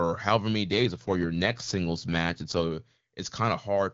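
After "however many", from 0.70 to 2.70 s, an AMR rate drop turns the speech rough and synthetic. Unlike a dropout or band cut, nothing goes silent or muffled.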